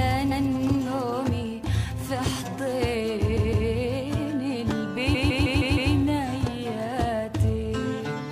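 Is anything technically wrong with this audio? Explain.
Yes. The audio has repeated frames at three points. A block of about 0.16 s, which fits a run of six compressed frames, plays more than once. From 0.30 to 0.46 s it plays twice. From 3.36 to 3.67 s it plays three times. From 5.14 to 5.92 s it plays six times. The decoder was handed the same frames again, so the same sliver of sound loops as a stutter. Each repeat adds time, up to about 0.78 s at the last point.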